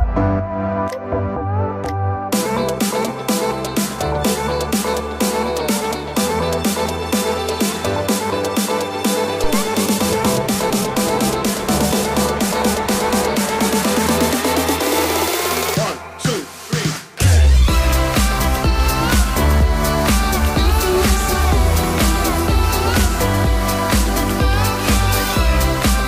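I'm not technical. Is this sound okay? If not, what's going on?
No. At about 9.44 seconds there's a deep, sudden thump that dies away quickly, gone by about 9.76 seconds. This is a phantom power thump: the microphone's power supply was switched on or off mid-recording, and that jolt came through as a bump.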